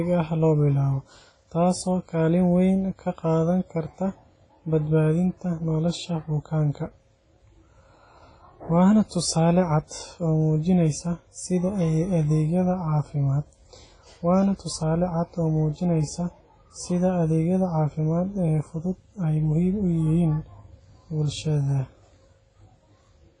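From start to finish the speech carries heavy WMA compression damage, likely from a transform codec at a low bitrate (the sound fits something near 24 kbps). Quantisation noise smears over tens of milliseconds around each syllable, giving a ringing, washy quality and a hiss that swells and fades with the signal. Nothing sounds above 10.3 kHz. Unlike a plain low-pass filter, weak spectral detail is missing within the band too, and the noise pumps with the signal.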